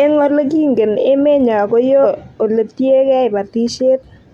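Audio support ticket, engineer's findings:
Brief garbled burst in the speech at 2.00 to 2.05 s, about 54 ms. Damaged data in the compressed stream: corrupt bytes there, so the decoder misreads those frames, loses sync, then relocks on the next valid frame header.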